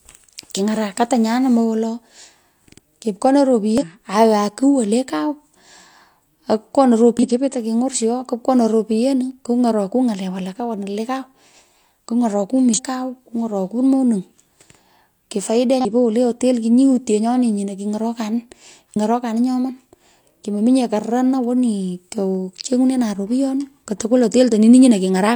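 Damaged data in a compressed stream appears at 3.78–3.84, 7.19–7.25, 12.74–12.80, 15.81–15.86 and 18.92–18.97 s. Corrupted bytes make the decoder misread frames and lose sync until it finds the next header, producing brief chirps or blips of about 50 ms in the speech.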